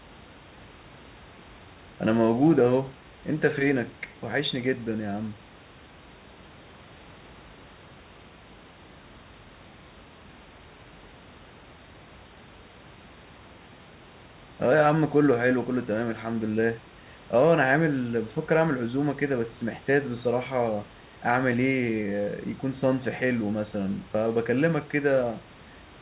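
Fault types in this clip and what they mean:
No faults can be heard anywhere in this audio.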